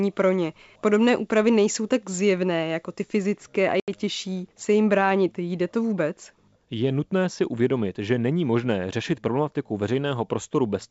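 At 3.80 to 3.90 s a hard silent hole gives way to a slightly distorted return: packet loss on an ADPCM call, 80 ms lost, knocking the decoder's predictor out of step.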